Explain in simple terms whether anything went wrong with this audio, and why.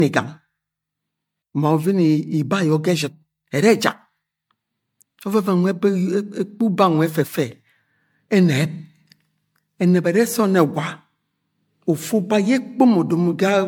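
Something did go wrong, and it runs through the whole speech clip. It has generation loss: it sounds swirly and a bit hollow, and the starts of sounds come out blurred instead of crisp. That's likely from the audio being saved as MP3, opened, and saved as MP3 again around five times. Each save throws away a little more in slightly different places, so the damage piles up into that washed-out, smeary quality.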